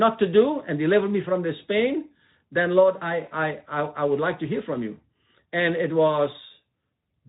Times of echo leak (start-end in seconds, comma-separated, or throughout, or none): none